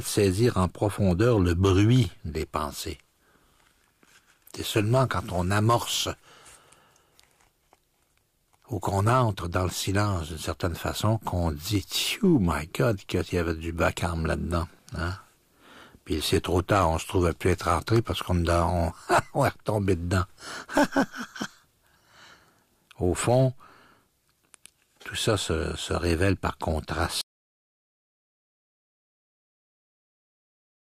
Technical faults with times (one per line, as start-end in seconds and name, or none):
27.21-30.98 audio dropout to silence